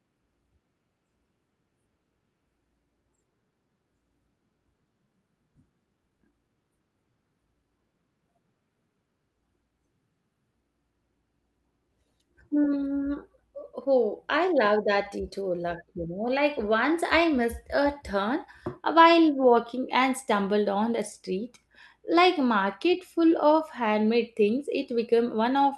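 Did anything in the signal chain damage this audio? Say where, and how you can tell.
Yes. At 5.55 s there is a skip ahead in the network jitter buffer: playback jumps forward with no gap or fill, and roughly half a second of speech is gone. The two sides are spliced almost directly, which fits dropping audio that had queued up behind a delay.

Right after, from 5.70 to 6.80 s, a jitter buffer speed-up runs the speech at about 113% with unchanged pitch. The receiver is trimming short pitch-period-length pieces repeatedly, around 150 ms in total, to bring an overfilled buffer back down, so delivery sounds hurried.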